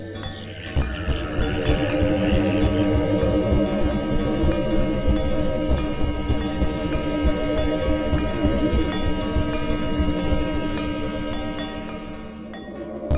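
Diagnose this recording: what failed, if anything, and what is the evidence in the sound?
Nothing failed; the call path stops at 4 kHz.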